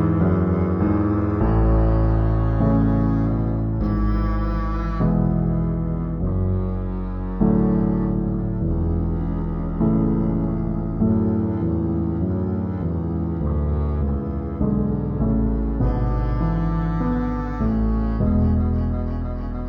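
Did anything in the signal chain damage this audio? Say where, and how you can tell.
Yes. A stereo file was read as stereo read as mono at the sample-format or file-reading stage: the interleaved left and right samples were taken one after another as a single channel. Every stereo frame became two mono samples, so throughout the audio the sound plays at half speed and a full octave low, 12 semitones down. A fainter mirrored copy of the content also sits in the upper half of the spectrum.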